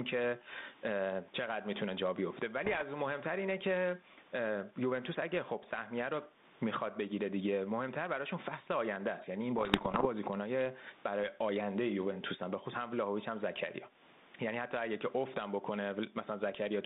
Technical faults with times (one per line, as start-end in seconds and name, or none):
0.00-16.85 gain pumping
2.64-2.83 bit errors on an ADPCM link
9.58-10.07 bit errors on an ADPCM link